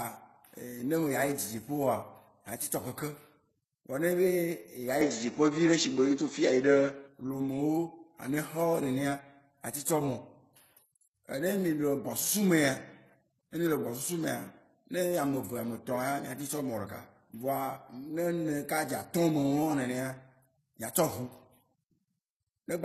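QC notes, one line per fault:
Throughout: transcoding between lossy codecs. The speech carries two layers of coding damage at once: the smeared, slightly swirly texture of a very low-rate HE-AAC-style codec over the pre-echo and warble of an earlier MP3-style pass, likely from a chain of roughly 45 kbit/s then 16 kbit/s. The second codec spends its scarce bits re-encoding the first one's artefacts. A spectrogram shows a hard ceiling near 12.3 kHz, with blotchy, patchy high bands beneath it.
5.01–7.08 s: input switched to a poorer device. With no gap, the speech turns duller and boxier, then clears again at 7.08 s. This is likely a change to a narrower-band microphone or headset path with its own tone and gain. On a spectrogram, the top edge drops abruptly to about 7.6 kHz for that stretch, along with a faint new noise floor well below the speech. On the waveform, the envelope shifts by a few dB at both boundaries.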